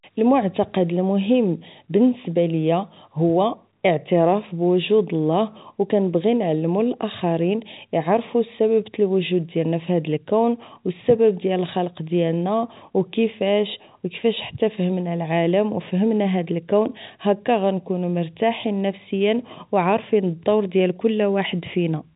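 No faults are present in the speech; the band tops out at 4 kHz, as expected of the G.711 telephone coding path.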